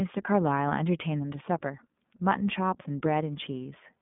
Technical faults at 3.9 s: iLBC codec

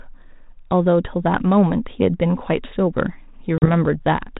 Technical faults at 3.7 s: packet loss on an ADPCM call

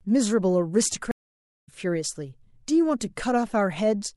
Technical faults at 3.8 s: none

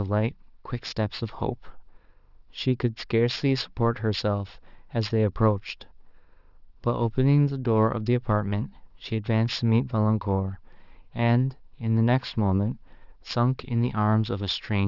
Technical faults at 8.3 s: aliasing

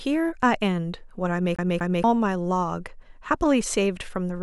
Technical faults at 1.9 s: CD stuck on one turn

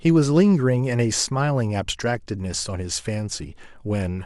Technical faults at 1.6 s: none

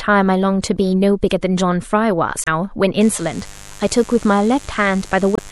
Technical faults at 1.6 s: MP3 compression

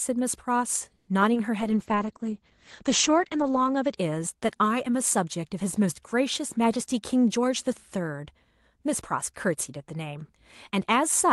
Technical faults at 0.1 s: none

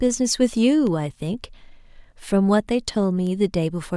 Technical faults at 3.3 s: bit error spike

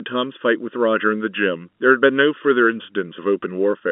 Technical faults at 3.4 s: channel delay (comb filtering); packet loss with pitch repetition

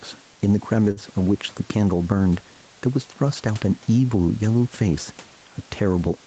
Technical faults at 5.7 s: gain pumping

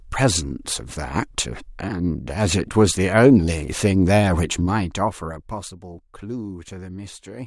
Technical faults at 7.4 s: none

